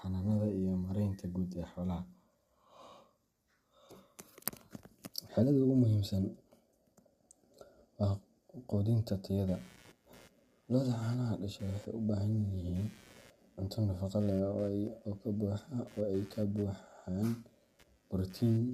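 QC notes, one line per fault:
Throughout: low-delay AAC compression. The grain points to a low-delay AAC coder such as AAC-ELD, likely running near 32 kbps. Its very short frames, around 10 ms, cannot separate the speech harmonics cleanly and spend bits quickly, so too few remain. The damage is plainly audible: the voice sounds rough and grainy, noise fills the gaps between harmonics, and the top band comes across as dulled or synthetic rather than natural.
9.48 to 18.74 s: computer activity noise. Load changes in the computer disturb the ground shared with the audio circuit, and that interference gets into the signal. It comes in as a buzzy, chirping pulse train repeating at roughly 100 Hz, sitting around 30 dB below the speech. It follows the computer's activity rather than the talker, so it continues through pauses and does not track the level of the speech.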